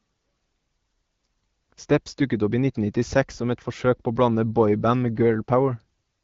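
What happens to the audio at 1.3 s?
Nothing goes wrong at 1.3 s: the speech carries on intact through the AMR-WB wideband coding.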